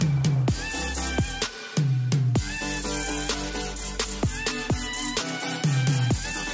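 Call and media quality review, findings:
No faults found; call microphone processing present as expected, with the lowest bass trimmed by its high-pass filter and nothing above 8 kHz.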